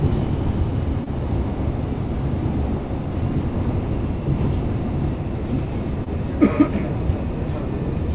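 At 1.04 s and 6.04 s, short concealed packet loss: about 20 ms of audio never arrived and was filled by extending the preceding sound, heard as a brief smear, showing as a smoothed waveform patch, with everything above 4 kHz already absent from the call path.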